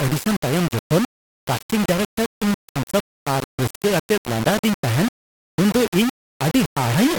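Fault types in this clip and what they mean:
Low bit depth without dither: The speech carries a harsh, grainy distortion from start to end, and the grit rises and falls with the voice. Quiet passages break up badly, and the softest parts sputter or drop out to silence. The error sits only about 10 dB below the signal. This likely comes from rounding the audio to about 3 bits with no dither, so the error follows the waveform.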